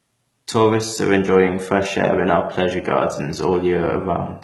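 Speech runs through the whole clip with heavy damage from what is likely HE-AAC compression, with the damage consistent with a very low bitrate, around 16 kbps. The treble is not carried directly. It is rebuilt from copied lower bands, so the sibilants sound gritty and metallic, and the upper harmonics do not sit in line with the lower ones. Nothing is present above 11.8 kHz.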